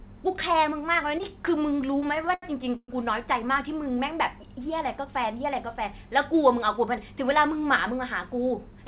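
From 1.18 to 1.23 s the level dips abruptly by about 6 dB, likely one channel dropping out before the mono sum; the waveform and spectrogram briefly thin across all bands. From 1.92 to 2.90 s there are repeated stalls (stutter): nine times the jitter buffer ran dry and the last sound was stretched, 262 ms in all, the longest about 119 ms. The speech drags and hiccups, and the spectrogram shows smeared, repeated horizontal stretches. Throughout, nothing appears above 4 kHz, consistent with the narrowband call codec.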